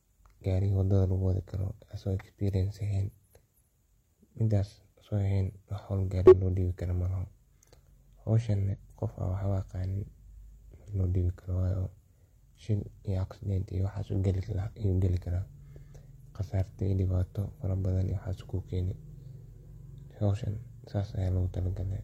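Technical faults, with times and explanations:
6.27–6.34 s, 8.69–8.75 s and 18.07–18.13 s: damaged data in a compressed stream. Corrupted bytes make the decoder misread frames and resync, producing brief glitches.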